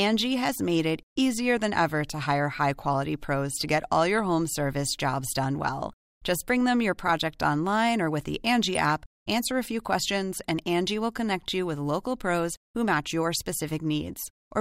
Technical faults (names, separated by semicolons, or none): DAB burbling